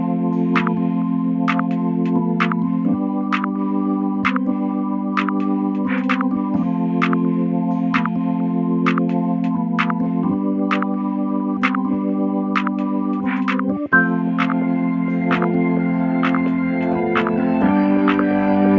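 No technical faults can be heard anywhere in the recording; the signal stays steady and intact throughout.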